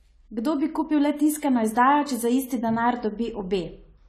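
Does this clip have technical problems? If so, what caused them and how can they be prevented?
Yes. Low-bitrate AAC compression, likely AAC-LC at around 32 kbps, runs throughout the speech, leaving nothing above 14 kHz and plainly audible dull, smeared, fizzy sibilants. Encoding at a higher bitrate or keeping a lossless copy would prevent it.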